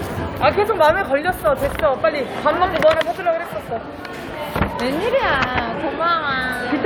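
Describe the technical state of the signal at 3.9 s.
At 3.9 s the signal is intact, with no dropout, distortion, glitch or other technical fault audible at that moment.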